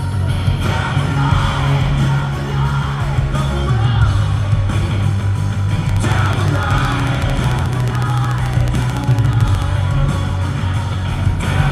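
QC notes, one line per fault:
5.89–9.63 s, train of clicks: steady ticking at 13.7 per second, around fifty clicks poking well above the sound, likely interference from nearby gear.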